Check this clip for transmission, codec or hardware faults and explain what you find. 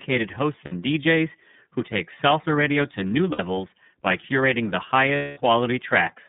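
Two faults are audible in this speech: a narrowband, slightly synthetic coloring throughout, and three short gaps filled with a held, buzzy sound.

The whole clip sounds thin and a little rough, with a faintly artificial edge on the voice and nothing above about 3.7 kHz. The lowest frequencies are also missing below roughly 150 Hz. This is the iLBC codec, a narrowband VoIP coder that codes each frame's excitation independently. The band limit and the plainly audible coding damage fit its 13.33 kbps mode with 30 ms frames.

The lost iLBC frames occur at 0.65 to 0.73 s, at 3.32 to 3.40 s just after "salsa radio to new", and at 5.15 to 5.39 s just after "by curating the". Each gap sounds like a stretched, slightly buzzy vowel. The last one is longest, at about 210 ms, and audibly fades. The first two last about 60 ms each, roughly two frames. When packets go missing, the decoder repeats the last pitch cycle mixed with noise. 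Because each frame stands alone, the speech recovers almost immediately afterward.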